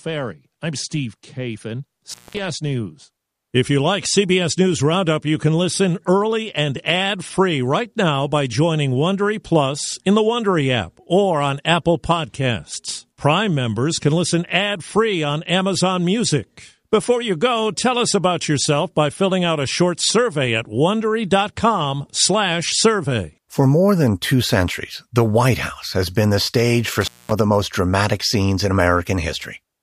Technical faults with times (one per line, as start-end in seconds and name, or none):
2.10-2.39 intermittent contact
27.01-27.32 intermittent contact